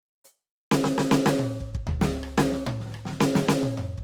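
Throughout, the music carries grainy, rough tonal texture with band noise filling in, likely Opus compression in its music mode at a low bitrate near 24 kbps, with content reaching about 20.2 kHz.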